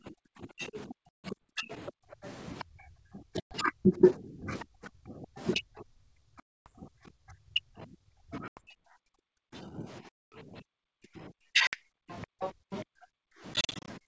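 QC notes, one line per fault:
0.00–13.25 s, speech suppressed in double talk. The talker's level keeps sinking while the far side is active, across about 7 s in total. At its deepest the drop is about 40 dB, enough to make the sound vanish. The likely cause is the echo canceller failing to tell near speech from loudspeaker echo during overlap, so it attenuates everything at once.
1.09–1.38 s, 3.40–3.56 s, 6.40–6.68 s, 8.48–8.67 s, 10.09–10.40 s, 11.67–11.77 s and 13.54–13.89 s, packet loss on an ADPCM call. Each gap is a hard-edged silent hole. The losses are 150, 110, 260, 90, 230 and 60 ms. The last one is 190 ms, scattered over 340 ms in runs of up to 40 ms. After each hole, the decoder's predictor and step size no longer match the sender's. The sound resumes slightly distorted until they re-align.
1.71–2.64 s, 4.59–4.65 s and 12.10–12.78 s, other side's voice leaking through. A second, fainter voice sits under the talker. 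It is about 25 dB down in the first two spots, and a brief scrap at 4.59 s. At 12.10 s it rises to about 15 dB down. The likely cause is far-end audio from the loudspeaker reaching the microphone and escaping the echo canceller.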